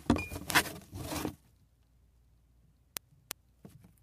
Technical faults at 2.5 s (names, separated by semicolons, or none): word clock ticks